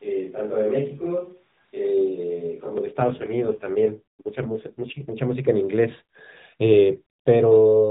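From the start until 2.78 s the speech sounds roomy and hollow, thin in the bass, with faint background noise well below the voice and little change in level. This is likely a switch to a distant microphone, with the close microphone's signal missing.

From 3.0 s to 5.12 s the voice turns rougher and buzzier, more synthetic, with no gap and no change in bandwidth. This is an AMR rate drop: the narrowband mobile codec fell to a lower mode and stayed there until it recovered. The sound fits a fall from 12.2 kbps to 4.75 kbps.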